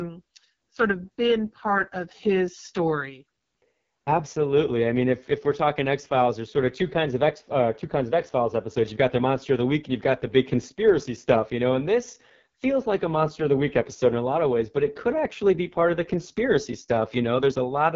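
The speech has been passed through the AMR wideband (HD Voice) codec at its lowest rate, which fits 6.6 kbit/s, for the whole clip. At that rate the pulse-driven vocal tract model has too few bits to follow the voice, so the sound comes out rough and raspy with heavy coding damage. Nothing is present above about 7.2 kHz, and the top band is filled with shaped noise rather than real detail.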